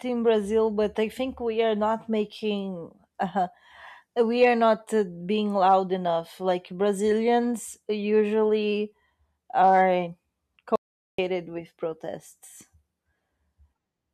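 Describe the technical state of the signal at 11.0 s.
At 11.0 s the speech is inside an audio dropout to silence lasting from 10.76 to 11.18 s, about 0.43 s, likely from the input being lost while recording continued. Unlike a natural pause, no room tone remains, and the speech resumes abruptly on "with protests".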